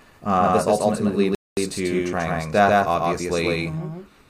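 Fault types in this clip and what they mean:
Doubled audio track, throughout: a second full-band copy of the speech trails the original by roughly 150 ms at about the same level, likely from a second, slower capture path.
Bluetooth stall, 1.35 to 1.57 s: just after "this ultimately" the speech drops to silence for 0.22 s and resumes, likely because the headphones' buffer emptied while delayed packets were resent.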